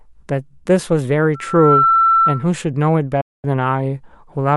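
Speech carries this clip, and from 1.34 s to 2.49 s a loudspeaker feedback squeal intrudes: a single 1.3 kHz tone swells over less than half a second to about 5 dB above the speech, the mark of a microphone-to-speaker loop, unlike a steady hum, which never grows. At 3.21 s a digital broadcast dropout mutes the audio after a fade of only 8 ms, leaving a 0.22 s hole until 3.45 s. What was sent in that time is simply gone, which points to roughly seven lost frames, rather than being filled or smeared as packet-loss concealment would do.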